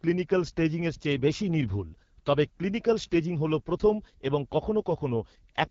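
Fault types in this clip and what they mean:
AMR wideband (HD Voice) codec: speech coded from a vocal tract model with noise-filled top band; at what sounds like 8.85 kbit/s it turns rough and raspy, unlike narrowband's muffled dullness.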